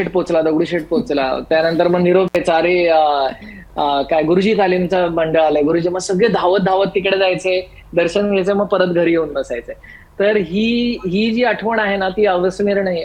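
At 2.28 to 2.36 s, a loose cable or plug briefly loses connection, an intermittent contact. The signal path opens for about 65 ms, so the sound drops out abruptly, with crackle at each edge and faint hiss filling the gap before it returns.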